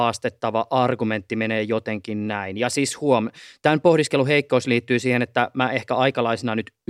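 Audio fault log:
No faults heard in this speech.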